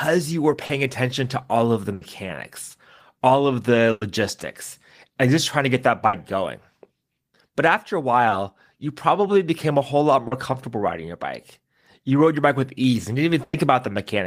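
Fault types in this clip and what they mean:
short concealed packet loss: Brief pieces of the call arrived too late for the decoder. The receiver patched each hole by extending the preceding speech, then blended back. Patches of 40, 20 and 40 ms near 0.65, 8.29 and 10.27 s cause small smears or wobbles.
burst of packet loss: Several packets in a row went missing, leaving longer holes. The last sound was held and faded, giving a brief buzz or hiss. This happens at 1.93, 3.91, 6.07 and 13.43 s, lasting 80, 100, 60 and 100 ms. Speech then resumes further on.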